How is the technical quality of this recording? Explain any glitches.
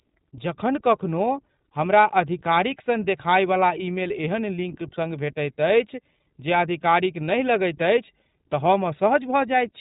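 The technical quality is limited by one fault present throughout: plainly audible narrowband voice coding.

iLBC codec, across the whole clip: each short frame's excitation is coded independently, which fits iLBC's 15.2 kbps mode with 20 ms frames. Nothing passes above 3.8 kHz, so the speech sounds muffled and telephone-like, with plainly audible rough, slightly synthetic texture.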